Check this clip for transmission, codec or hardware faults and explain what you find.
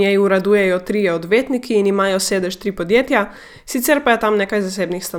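No faults are audible anywhere in this speech.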